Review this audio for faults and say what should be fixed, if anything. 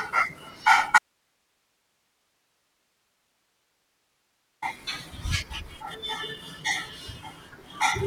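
There's an audio dropout to a faint residue from 0.98 s to 4.62 s: the speech cuts out abruptly for about 3.6 s, leaving only hiss sitting somewhere around 45 dB below the normal level, then snaps back mid-flow. That hard edge, with no fade or natural pause, points to the signal being lost upstream while everything after the break stayed live, most likely a momentary disconnect at the source or its link. Reseat and secure cables or check the wireless link before recording, and monitor live so a gap like this gets caught and retaken.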